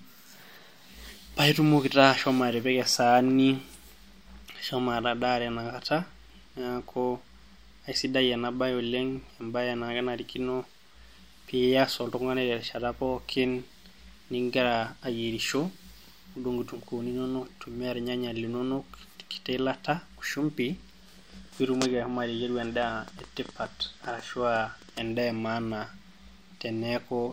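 No technical faults can be heard anywhere in the recording.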